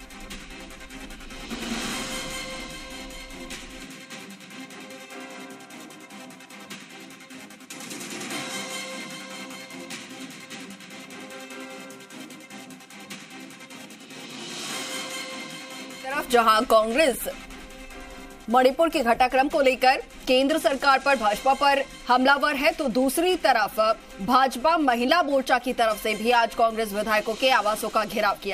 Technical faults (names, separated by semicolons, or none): none